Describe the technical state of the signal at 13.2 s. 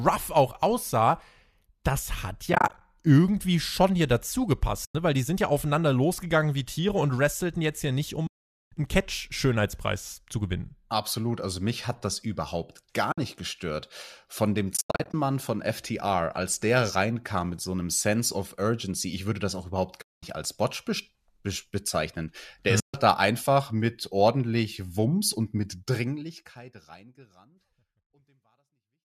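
Around 13.12 to 13.18 s the stream suffers AAC frame loss with muting. The decoder zeroes the missing spectrum for about 60 ms, leaving a soft-edged gap in the speech that fades out and back in.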